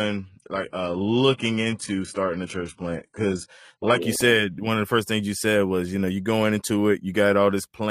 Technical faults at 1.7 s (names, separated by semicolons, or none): adaptive stream starting at a low bitrate